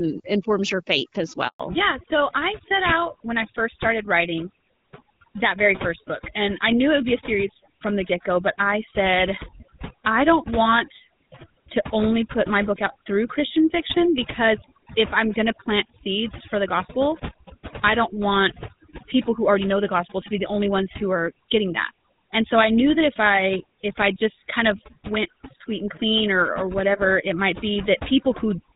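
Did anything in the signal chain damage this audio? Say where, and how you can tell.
Yes. Overdone noise removal runs throughout, at the call-processing stage: the background drops and breaks up into twinkling specks, as quiet bands are gated away.

Handover gap, at the network stage, from 1.48 to 1.60 s: the voice dies away and falls silent for 120 ms while the call switches networks and no speech frames arrive.

Fallback to narrowband, at the codec stage, from 1.60 s to the end: everything above 4 kHz disappears and the voice turns duller and rougher, as the wideband link gives way to a GSM full-rate codec.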